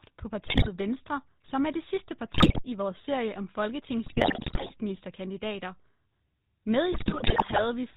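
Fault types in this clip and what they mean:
GSM full-rate codec: the whole clip passes through the original 13 kbps GSM speech coder. It models the vocal tract and excites it with a regular pulse train, which gives the speech a plainly audible buzzy, gravelly roughness. A spectrogram shows nothing above 4 kHz.
GSM bit errors: corrupted bits in the decoder's filter, pitch and gain values produce squawks, pops and gargling in four bursts, at 0.46–0.69 s, 2.34–2.62 s, 4.06–4.71 s and 6.92–7.66 s. These appear as smeared spectra and sudden level jumps in the waveform.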